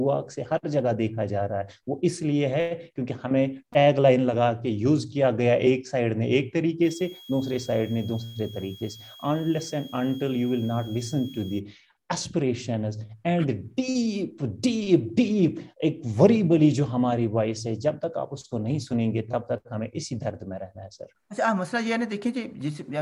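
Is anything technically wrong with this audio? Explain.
Yes. From 6.83 to 11.60 s there is a switching supply whistle: a supply's switching frequency becomes audible as a faint tone around 3.3 kHz, roughly 25 dB down. It drifts slightly, unlike a fixed-pitch interference tone.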